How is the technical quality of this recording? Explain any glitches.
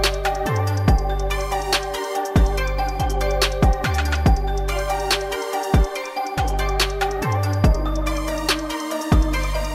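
One glitch stands out. At 1.94 to 1.97 s, a corrupt frame was decoded. Flipped bits across a couple of compressed frames misplaced energy, giving a brief burst peaking near -15 dBFS.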